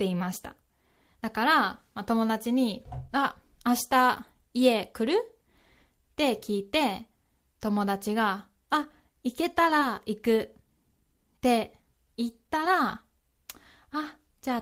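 At 9.79 to 9.83 s there is short concealed packet loss: about 20 ms of the speech arrived too late, and the receiver patched it by extending the preceding sound. It comes across as a brief smear. A spectrogram shows the preceding sound stretched out, then a soft crossfade back.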